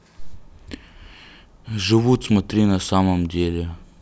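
Speech, with no technical faults to be heard anywhere in the recording. Nothing in the audio points to a problem in how it was captured, processed or delivered.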